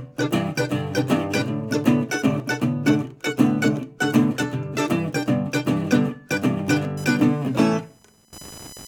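From 0.17 to 6.85 s, the music has a click every 2.22 s, about four in all. These are likely clock drift buffer slips, where mismatched device clocks drop or repeat a few samples.

From 6.97 s to the end, a buzzing chirp near 1 kHz sits about 25 dB below the music. This is computer activity noise, with changing computer load disturbing the audio ground.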